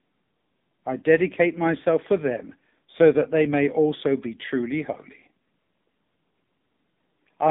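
Speech run through the AMR narrowband mobile codec throughout: band squeezed to 150 Hz–3.7 kHz, buzzy and synthetic, which fits a low mode around 6.7 kbps.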